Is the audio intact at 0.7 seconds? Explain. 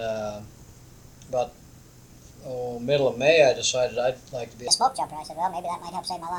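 Yes, at 0.7 s the audio plays through cleanly, with no dropout, click, distortion or other fault audible at that point.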